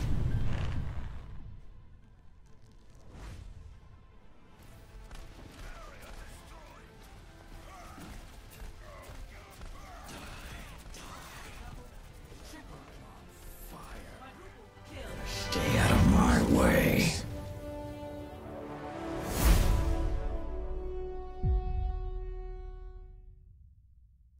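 At 16.82 s and again at 21.90 s, a single sharp click cuts through the sound. Each is likely from dropped samples. Only a handful go missing, a tiny fraction of a millisecond. The waveform jumps to a later value, leaving a thin vertical line across the spectrum.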